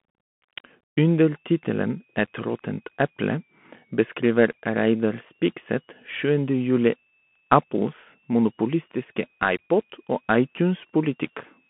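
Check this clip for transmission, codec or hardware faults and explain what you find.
Two faults are present: a narrowband Bluetooth headset codec across the whole clip, and a faint switching supply whistle from 1.04 s to the end.

The Bluetooth CVSD headset codec colours the entire speech clip. The passband runs from about 150 Hz to 3.4 kHz, and nothing is heard above 3.8 kHz. CVSD sends one bit per sample, up or down, and adapts its step size. The sound points to a 64 kbps link. Loud, bright sounds outrun the step and distort. S sounds come through scratchy, and a granular hiss sits under the speech. The damage is plainly audible.

The switching supply whistle starts at 1.04 s and lasts to 11.70 s. It is a high, thin tone near 3 kHz. Its pitch wanders between about 2.16 kHz and 2.99 kHz. A power supply in burst mode, or two supplies beating, produces it. It stays very faint, roughly 45 dB below the speech.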